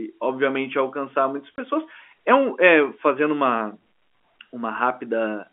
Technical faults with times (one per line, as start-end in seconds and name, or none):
1.56 packet loss filled with silence